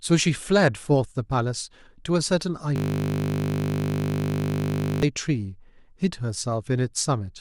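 From 2.76 s to 5.03 s the speech stops and a system hang loop takes over. The playback host or driver stalled, and the audio hardware kept replaying the same 20 ms segment of its ring buffer, over a hundred times back to back. Because the looped piece is so short, it doesn't register as stutter. It fuses into a steady, harsh buzz at 50 Hz that holds for roughly two and a quarter seconds.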